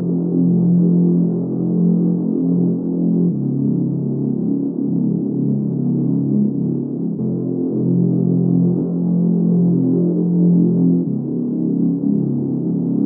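For the first 4 seconds the player is on a low-bitrate rendition, an adaptive stream starting at a low bitrate: treble sounds thin and synthetic and codec artefacts are stronger, which fits HE-AAC near 16 kbit/s. At 4.0 s quality steps up abruptly, without a gap, consistent with AAC-LC around 96 kbit/s.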